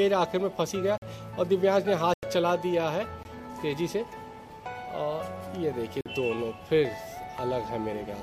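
Blocks of digital silence at 0.98–1.02 s, 2.14–2.23 s, 3.23 s and 6.01–6.06 s (about 46, 93, 20 and 46 ms) fit unfilled 2048- and 4096-sample buffers. Each shows as a flat waveform gap and a blank spectrogram strip.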